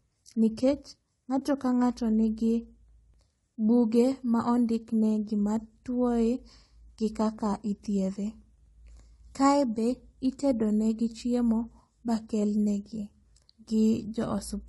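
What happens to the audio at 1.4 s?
At 1.39 to 1.42 s there is AAC frame loss with muting: the decoder zeroed the missing spectrum, and the overlapping windows fade the speech out and back in, leaving a brief dip that fits a single lost frame of about 20 ms. Unlike a hard dropout or splice, it has smooth edges.

Around that gap the speech sounds rough and grainy, with noise filling between the harmonics and a thin, synthetic-sounding top band. That points to low-delay AAC compression, likely AAC-ELD at a low bitrate around 32 kbps. It is continuous rather than a momentary event like the dip.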